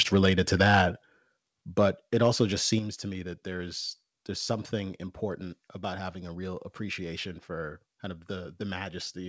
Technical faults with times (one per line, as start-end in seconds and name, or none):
1.02 microphone volume stepped down
2.79 microphone volume stepped down